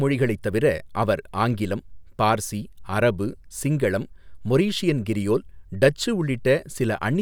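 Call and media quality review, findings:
No faults found in recording.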